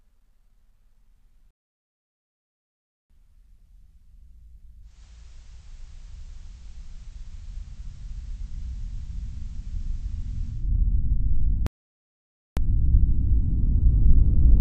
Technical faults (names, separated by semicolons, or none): playback stall; digital radio blending to analogue